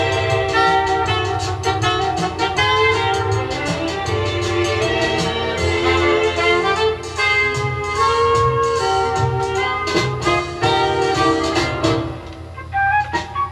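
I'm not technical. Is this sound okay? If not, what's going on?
Yes, it's fine; nothing here sounds wrong.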